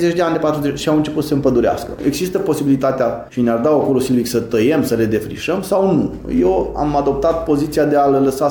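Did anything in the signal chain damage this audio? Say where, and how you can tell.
No, nothing along the chain seems to have damaged this audio; I can't hear anything that points to a problem at any stage.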